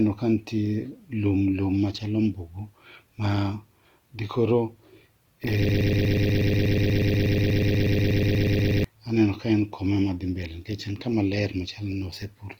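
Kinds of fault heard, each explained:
Opus compression: There's a grainy, rough texture over the whole clip, with the speech sounding noisy where it should be clean. That's likely Opus running in its music mode, where starved bands get filled with folded or noise content instead of being left empty, so you get grit rather than swirl. The bandwidth hasn't collapsed and content still reaches about 20.2 kHz, but the damage is plainly audible and fits a low rate of around 24 kbps.
Broken-record loop: From 5.69 s to 8.84 s the audio locks onto a 121 ms fragment and plays it back to back, about 26 times, for roughly three seconds. It's an exact repeat, so it sounds mechanical and stuttering. The likely cause is a stalled player, encoder or stream that kept resending the last chunk it held, and whatever speech should have played in that stretch is simply gone.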